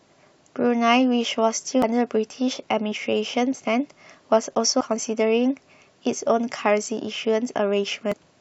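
At 1.82 s the speech breaks into a brief glitch. Another blip comes at 4.80 s and from 8.12 to 8.14 s. This is damaged data in a compressed stream. The decoder misreads corrupted frames, loses sync and hunts for the next header.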